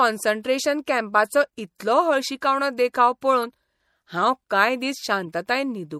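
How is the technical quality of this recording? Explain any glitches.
The technical quality is compromised. The speech carries plainly audible lossy-coding damage from start to finish, and two short decoding glitches break through near the end.

MP3 compression, throughout: The sound is most likely an MP3 squeezed to a low bitrate, around 64 kbps. With so few bits, the encoder drops the upper treble at a fixed cut-off and discards quieter spectral detail that flickers in and out between frames. The speech therefore sounds watery and swirly, sibilants turn metallic and chirpy, and consonant onsets blur.

Corrupt frame decoded, 3.43–3.45 s and 5.26 s: Right after "कॅम्पाचो इतलो हळशिकावणो देखाव" and again right after "हांव कांय", damaged compressed data was decoded as if it were valid. About two frames are hit each time. Misread gains and codes place energy at frequencies it doesn't belong, which produces a brief chirp-like burst. 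The first burst is fairly prominent, while the second is a fainter blip lying well below it.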